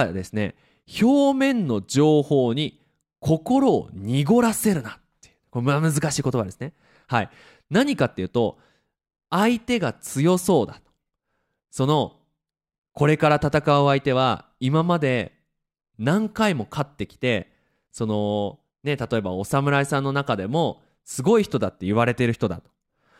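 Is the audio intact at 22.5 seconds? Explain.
Yes, at 22.5 seconds the speech plays through intact, with no dropout, click, distortion or other fault at that moment.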